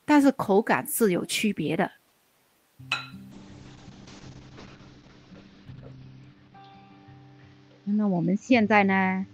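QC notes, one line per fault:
3.35 s to end: call bitrate drop. Audio turns rough and muffled, with highs cut above 6 kHz, which fits the encoder falling from 32 to 7 kbps. This is a lasting tone change, not a gap.
5.68 s: repeated buffer. A tiny segment, about 1.33 ms, plays three extra times, giving a brief buzzy click rather than a silence. This fits a 64-sample buffer.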